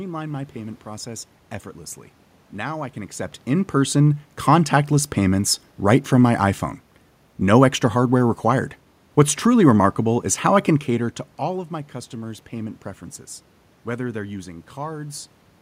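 No technical faults are audible.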